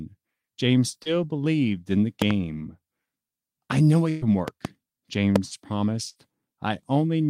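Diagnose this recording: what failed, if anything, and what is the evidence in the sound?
A brief smear, like a momentary wobble, runs from 1.03 to 1.07 s, just before "believed in the". This is short concealed packet loss at the network stage. About 20 ms of speech arrived too late for the decoder, and the receiver covered the hole by extending the preceding sound before blending back into the real signal. That stretch of the original is gone, leaving a slight blur rather than a clean dropout.

Sharp loud pops sit on top of the speech, which carries on underneath. Two in quick succession come at 2.22 to 2.33 s, right after "believed in the", peaking at about 15 dB above the speech. Another pair at 4.48 to 4.67 s reaches about 10 dB, and a single pop at 5.36 to 5.38 s is about 15 dB. Their shape points to the analogue wiring or converter stage, likely voltage steps from a loose connector, switch or static discharge.

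Two held, fading stretches mark a burst of packet loss on the network. Just after "I know", from 4.09 to 4.23 s, about 120 ms of speech is replaced by a continued, decaying imitation of the last sound, with no silent gap. A shorter burst at 6.09 to 6.17 s fills about 60 ms the same way. In both places the speech picks up again further on, and what should have been spoken during the gap never appears.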